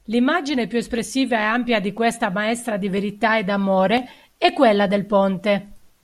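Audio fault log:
0.98–5.97 s, clock drift buffer slips: regular clicks occur about once per second through the speech, evenly spaced at a 1.00 s interval. The likely cause is two devices running on separate clocks that disagree by a few hundred parts per million. The buffer between them drifts until a small block of around fifteen samples is dropped or repeated. Each slip breaks the waveform, producing a brief tick.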